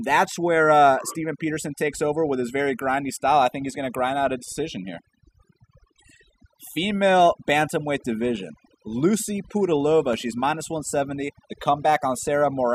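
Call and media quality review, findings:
Overdone noise removal, throughout the clip. The background drops away and breaks into twinkling, warbling specks. Probable component is a noise reduction stage set too strong: it pulls individual frequency bands down whenever they sit near its noise estimate, taking quieter speech detail with them. Spectrogram shows scattered, flickering isolated blobs on an emptied background.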